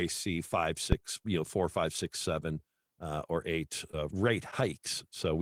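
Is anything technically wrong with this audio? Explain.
Yes, two faults are audible.

From 0.92 to 1.36 s there is a phantom power thump: a supply switching on or off on the live input sends a voltage step through the coupling capacitors, giving one deep thud that dies away in about 97 ms. Its smooth electrical decay and lack of scrape or rattle set it apart from a handling bump.

From 3.91 to 3.95 s comes short concealed packet loss. About 20 ms of the speech never arrived, and the receiver bridged 14 ms of it by extending the preceding sound before blending back. The result is a brief smear rather than the silent gap of a plain dropout.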